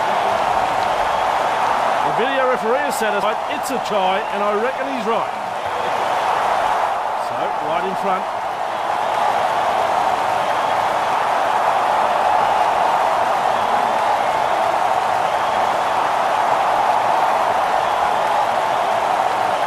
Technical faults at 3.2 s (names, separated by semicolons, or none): compressed frames skipped